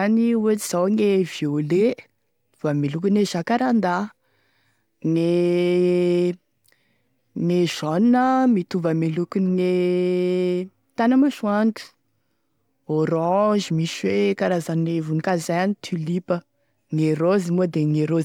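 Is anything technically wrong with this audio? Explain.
No, nothing technically wrong can be heard in this speech recording. The audio holds steady throughout with no technical faults to point to.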